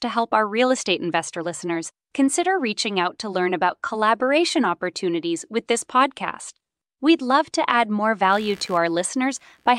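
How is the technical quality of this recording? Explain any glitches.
One glitch stands out near the end of the speech. From 8.32 s, just after "love to add more", and running to the end, a buzzy chirping rasp pulses around 70 times a second, roughly 30 dB below the speech. This is computer activity noise: shifting processor or peripheral load disturbs the ground shared with the audio circuit, so the buzz follows the machine rather than the sound.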